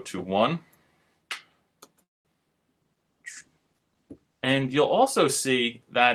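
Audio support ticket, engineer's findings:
Call audio freeze, 2.03–2.28 s: sound stops, brief tail then roughly 210 ms near-silence, resumes exactly where it left off, nothing skipped. Likely jitter buffer underrun from delayed packets. Unlike packet loss, no content missing; playout now runs about 214 ms later.

Call bitrate drop, 2.82–4.87 s: audio turns coarse and muffled, high end gone, for about 2 s, then clears. Encoder bitrate cut from 48 to 17 kbps after the bandwidth estimate fell. Unlike a freeze, continuous, with no gap or timing shift.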